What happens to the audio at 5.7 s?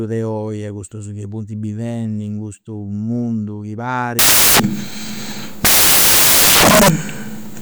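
At 5.7 s you're in the middle of a stretch of samples built from the wrong bytes, which runs from 4.19 s right to the end of the clip. The reader is assembling each sample's bytes in the wrong order or with a one-byte offset, so the jittery low-order bits end up as the big part of every value. What you hear is loud, harsh noise swamping the speech, close to white on the louder sounds.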